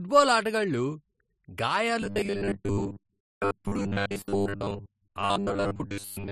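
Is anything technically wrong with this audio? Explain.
Yes. From 2.02 s to the end, the speech has robotic sound from repeated short buffers, likely because new audio arrives too seldom and about 10 ms segments are replayed instead. This forces a rigid 100 Hz metallic buzz over most of the audio, seen as evenly spaced harmonics on a spectrogram and identical repeating cycles in the waveform.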